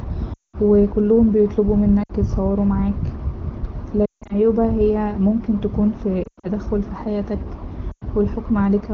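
Lost AMR speech frames hit the speech at 0.33 to 0.56 s, 2.03 to 2.11 s, 4.06 to 4.35 s, 6.23 to 6.47 s and 7.92 to 8.03 s. Corrupted frames forced the wideband decoder to re-use its last good pitch and vocal-tract settings at falling gain, so within roughly 60 to 200 ms of lost sound the voice drops to near silence within two frames. The return is briefly weak.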